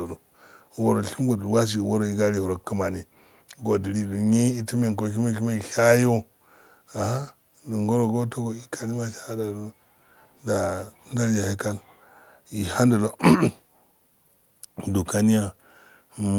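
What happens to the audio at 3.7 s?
Nothing goes wrong at 3.7 s; the speech continues through that moment intact, with no dropout, click or distortion.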